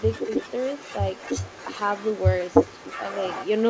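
From 0.0 to 3.7 s, a delayed copy of the speech trails 299 ms behind, roughly 10 dB quieter: likely an echo leak past a loudspeaker-side echo canceller.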